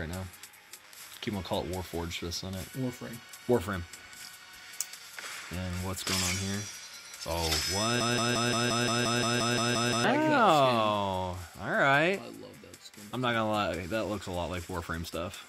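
A broken-record loop runs from 8.01 to 10.04 s: one fragment of about 175 ms repeats exactly, back to back, 12 times, and whatever should have played in those two seconds never arrives. The cause is likely a player, encoder or stream that stalled and kept resending its last buffered piece. Unlike an echo or reverb tail, nothing decays or overlaps. Unlike a brief stutter, it keeps repeating identically for seconds.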